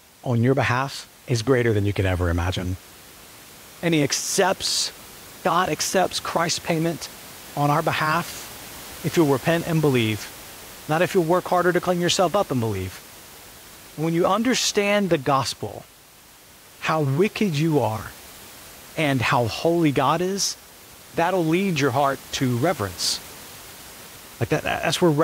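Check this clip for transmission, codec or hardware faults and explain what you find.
Nothing in the chain shows a problem; the only thing under the speech is the room's own background noise, sitting about 21 dB below it and belonging to the recording itself.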